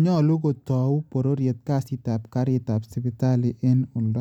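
No technical faults are audible.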